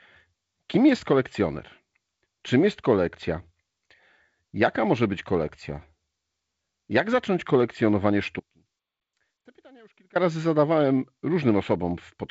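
Across the whole recording the speech has a hollow, phasey top end, with a fixed notch around 5 kHz. This is channel delay (comb filtering): one channel trails the other by only a few samples, a small fraction of a millisecond, so summing them cancels evenly spaced frequencies. The G.722 wideband coding at 48 kbit/s, with nothing above about 7.7 kHz, sits beneath this.

From 8.40 s to 10.15 s, right after "zacząć kolekcjonowanie", the sound cuts abruptly to a faint residue about 30 dB down, and it snaps back at "razy zadawałem". This is an audio dropout to a faint residue. The likely cause is the signal being lost for about 1.76 s while the path stayed live.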